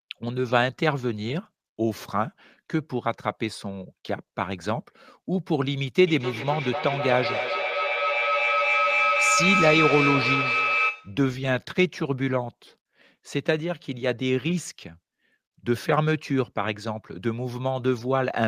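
From 6.07 s to 11.26 s the speech suffers a feedback echo between two devices. A second device in the same room is playing this call aloud, and its sound is picked up again by the first microphone, whose echo canceller only removes its own playback. Each word returns at a fixed interval of roughly 300 ms, thinner and more ringing, and at its loudest the echo reaches about the level of the speech itself.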